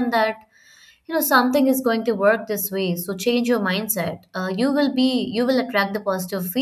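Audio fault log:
Nothing stood out on listening to this speech recording.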